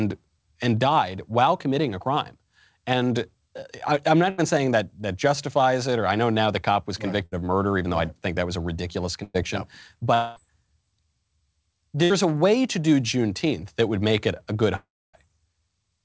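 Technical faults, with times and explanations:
4.30 to 12.12 s (4.30, 7.26, 9.23, 12.04 s), burst of packet loss: about 80, 60, 100 and 60 ms of sound is missing. The receiver stretches the last sound into a short fading buzz or hiss, reaching silence briefly only at 9.23 s, then jumps ahead. These gaps are too short to fall silent for long, unlike the dropouts.
10.14 to 10.38 s and 14.76 to 15.15 s, long network dropout: about 220 and 380 ms are lost, most likely because the network stopped delivering audio. At 10.14 s the held, fading fill lasts the whole gap. At 14.76 s it dies into about 280 ms of silence before sound returns further on. That stretch of silence sets it apart from a short burst.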